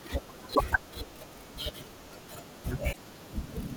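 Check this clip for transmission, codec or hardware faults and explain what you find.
Two short faults from damaged data in a compressed stream, at 0.51–0.61 s and 2.89–2.97 s. Corrupted frames make the decoder lose sync and hunt for the next header, giving a brief chirp, squawk, click or short hole in the speech.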